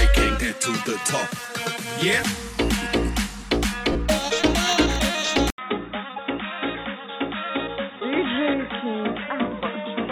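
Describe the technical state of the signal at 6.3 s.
Input switched to a poorer device, from 5.50 s through 10.11 s: the recording likely moved to a narrower-band input after an 80 ms silence. At 6.3 s nothing reaches above 3.8 kHz, so the sound is dull and boxy, roughly 10 dB quieter, over a new noise floor some 35 dB down.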